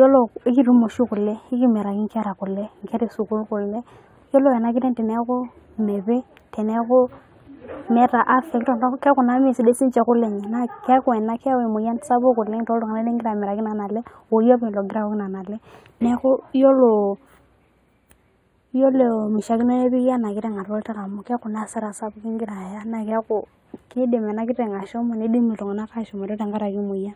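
From start to finish the speech has a channel delay, producing comb filtering. One side of the stereo pair lags the other by only a few samples, roughly a tenth of a millisecond. When the two are folded to mono, the shared content cancels at regularly spaced frequencies. With a lag that short, the first deep notch lands up around 5 kHz, so the top end sounds scooped and phasey, dulling the sibilance and air.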